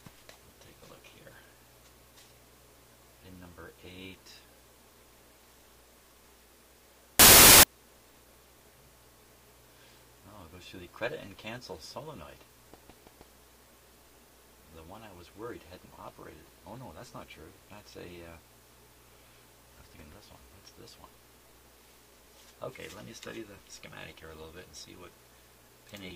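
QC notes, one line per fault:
7.19 to 7.63 s: samples built from the wrong bytes. For about 0.44 s the audio turns into loud broadband noise. Each sample was assembled from its bytes in the wrong way. The reader may have slipped by a byte, swapped the byte order or assumed another alignment. Either way, the fast-changing low bits now sit where the large part of each value belongs. The waveform becomes near-random, so the sound is replaced by noise.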